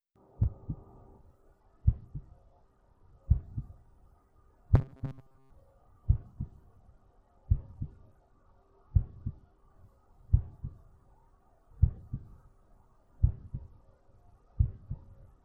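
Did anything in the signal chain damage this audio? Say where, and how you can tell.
Yes. At the codec stage, the Bluetooth link shows an SBC bit pool drop from 1.59 to 3.23 s, 6.78 to 9.58 s and 13.26 s to the end. The treble dulls and gritty quantisation noise rises, which fits the bit pool falling from 28 to 10, around 84 kbps.

From 4.75 to 5.50 s the sound turns into a rigid, metallic 133 Hz buzz, robotic sound from repeated short buffers. The likely cause is a starved driver buffer that loops about 7.5 ms of audio, replacing most of the real signal in that stretch.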